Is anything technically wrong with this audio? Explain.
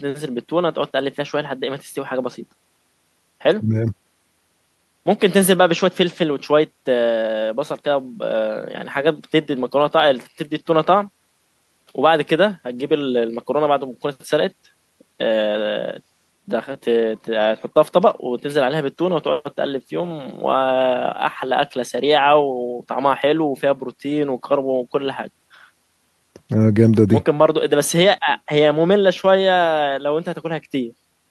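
No, nothing technically wrong can be heard here.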